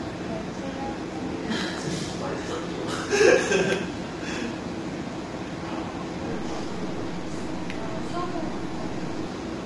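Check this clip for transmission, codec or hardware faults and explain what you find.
One codec fault runs through the whole clip, likely low-delay AAC compression (AAC-ELD) at a rate that fits about 32 kbps. Its very short frames give coarse frequency resolution, so tonal components get smeared and noise fills the gaps between them. The result is plainly audible, with nothing above 11.6 kHz. Plain band-limiting would leave the passband clean. Standard long-frame AAC keeps tonal detail sharper and smears into pre-echo instead.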